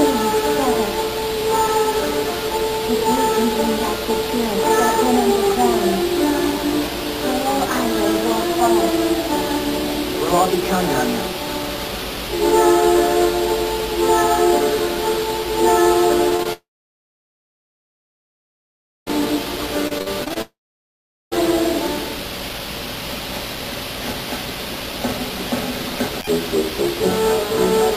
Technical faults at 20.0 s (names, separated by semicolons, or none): repeated packet loss (robotic sound)